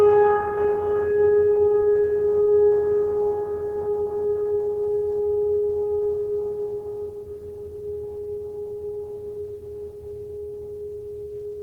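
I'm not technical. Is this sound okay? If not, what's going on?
Yes, this music sounds fine, with nothing going wrong anywhere in it that you'd need to worry about.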